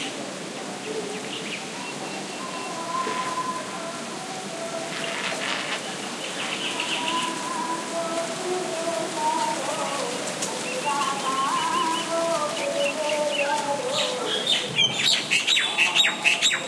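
No technical faults are audible anywhere in this recording of sounds.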